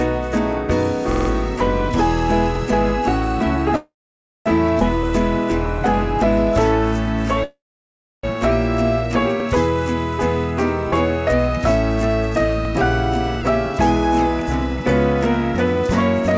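Call audio with nothing above 8 kHz, consistent with a G.722 wideband codec, shows repeated buffer stutters: a 46 ms segment, which fits a 2048-sample buffer, replays four extra times from 1.12 to 1.30 s and once each at 2.55, 9.40 and 12.65 s. Two call audio freezes stop the sound from 3.76 to 4.48 s and 7.44 to 8.25 s, mostly silent for about 0.55 and 0.66 s, likely from delayed packets draining the jitter buffer. A skip ahead at 4.80 to 4.83 s drops roughly 0.4 s of audio and joins the two sides almost directly.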